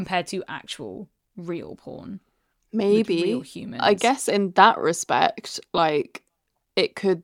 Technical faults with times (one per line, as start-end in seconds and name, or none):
5.77 lost LE Audio frames